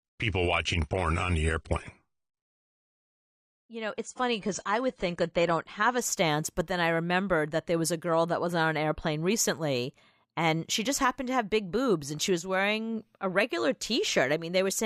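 Speech, and the first 6.0 seconds give away an adaptive stream starting at a low bitrate. From 0 to 6.0 s there's nothing above 10 kHz, so the top end sounds dull and the codec artefacts are easy to pick out, which fits something like a 32 kbit/s AAC version. Then at 6.0 s the quality jumps up with no gap as the player moves to a better rendition, plausibly around 96 kbit/s, once it has a read on the connection.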